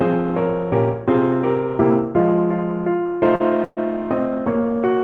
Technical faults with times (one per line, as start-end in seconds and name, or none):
3.35-3.42 short stall from a late packet
3.64-3.79 call audio freeze